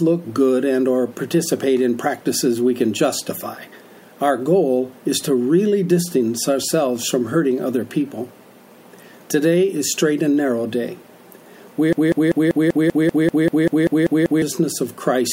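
A stall somewhere in playback or streaming likely left the system resending its last buffered fragment, producing a broken-record loop from 11.93 to 14.42 s: a 0.19 s slice repeats exactly, back to back, 13 times, and the audio due in that span never plays.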